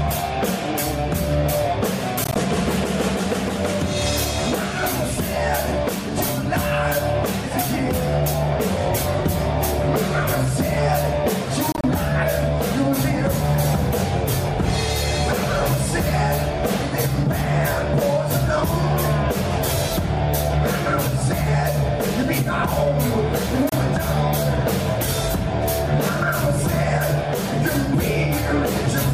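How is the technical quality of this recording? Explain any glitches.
The recording has three brief gaps, each likely a Bluetooth dropout. Packets reached the headphones too late and were discarded, so the output went silent. At 2.24 to 2.36 s, about 58 ms vanishes in scattered short holes. At 11.72 to 11.84 s, about 73 ms goes, the longest hole 29 ms. At 23.69 s, a single 29 ms hole appears. Each time, the sound resumes further along, as though it had kept playing.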